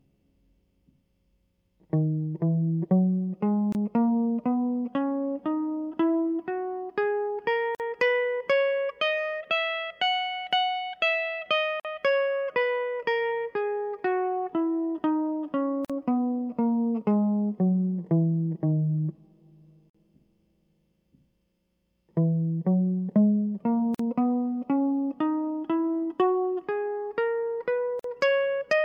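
The music drops out in short holes on a steady four-second cycle, a classic gap at a join of encoded pieces. The first runs 3.72 to 3.75 s (about 25 ms), then 49 ms holes at 7.75, 11.80, 15.85, 19.90, 23.95 and 27.99 s. Each four-second chunk was encoded on its own and butted together untrimmed, so encoder start delay and final-frame padding leave silence at every seam. The edges are smeared, and the music resumes right where it stopped.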